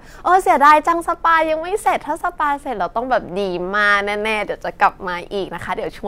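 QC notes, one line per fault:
0.65–0.74 s and 4.83–4.86 s, hard clipping: two short bursts where the speech peaks run past what the chain can pass, so the tops get sheared flat. The first, about 3 dB over for roughly 90 ms, gives a crackly edge on the peaks. The second is only about 1 dB over and lasts around 26 ms. Those squared-off peaks throw harmonics way up top, which is where the harshness comes from.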